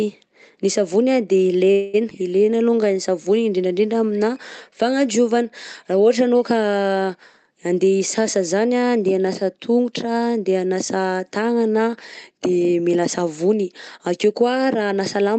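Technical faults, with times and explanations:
1.71 to 1.96 s, call audio freeze: the sound stalls and the last bit of speech is stretched into a fading buzzy tail for about 222 ms before speech resumes exactly where it stopped. The likely cause is packets held up in transit until the jitter buffer ran dry. Unlike a skip ahead, nothing is lost. A gap is inserted and everything after it arrives later.
2.10 to 2.12 s, skip ahead: playback jumps forward with almost no gap, only a few milliseconds of fill. Roughly 70 ms of speech is missing, and the two sides are butted together. The cause is a dropped stretch of audio while later audio was already queued. This is the opposite of the freeze just before it: the timeline shortens, so the delay that built up there is partly recovered and the missing material shows as an abrupt join.
2.45 to 2.95 s, jitter buffer slow-down: over half a second, speech runs at about 88% speed with pitch unchanged. 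Sounds are drawn out by a total of about 65 ms. The receiver was rebuilding its reserve by repeating single pitch periods many times. Unlike a freeze, there is no stall or fading tail. The speech keeps moving, just stretched.
8.19 to 9.06 s and 14.91 to 15.39 s, jitter buffer speed-up: speech runs at about 108% speed at normal pitch. The first stretch ends just before "hanasa tongotra andeha hanasa" and loses about 70 ms in total. The closing stretch loses about 40 ms. Short pitch-period pieces were trimmed repeatedly to cut excess buffered delay. Unlike a skip ahead, the shortening is spread thinly with no single audible jump, so the effect is a hurried pace.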